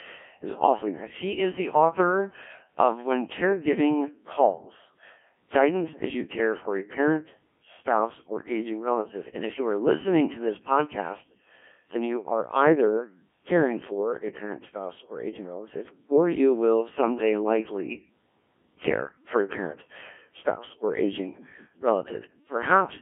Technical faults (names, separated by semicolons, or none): Codec 2 vocoder